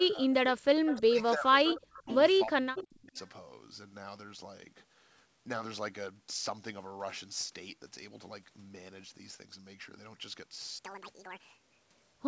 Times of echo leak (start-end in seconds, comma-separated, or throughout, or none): 0.85-1.00, 1.70-2.16, 2.76-2.96